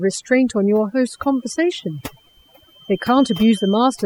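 A noise reduction stage set far too aggressively has worked on this speech clip from start to finish, which is overdone noise removal. It pushes individual frequency bands down or out entirely wherever they sit close to its noise estimate, and it takes the softer parts of the voice with them. The background drops and breaks up into twinkling specks. From 1.04 s to the end at 4.05 s, a loudspeaker-to-microphone loop is likely hovering just at the edge of feedback, so a single 3.1 kHz tone keeps ringing without building up. This feedback whistle sits as a thin, steady line behind the speech, around 15 dB below it, swelling and fading slowly in level.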